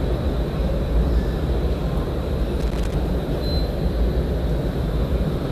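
A short recording of sounds with a burst of loose connector crackle from 2.60 to 2.94 s. A worn contact makes and breaks as it shifts, chopping the signal into irregular scratchy pops. The waveform shows ragged spikes and dropouts there, and the spectrogram shows broadband vertical streaks.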